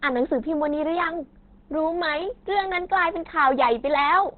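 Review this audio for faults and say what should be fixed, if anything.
Throughout the clip the speech is muffled and hoarse, with nothing above 4.2 kHz. This is the sound of Opus compression, likely pushed into its narrowband SILK speech mode at a very low rate, consistent with about 12 kbps. A plain low-pass filter would leave the remaining band clean, but here it sounds hoarse. Encoding at a higher Opus bitrate keeps the codec in full-band mode and prevents this.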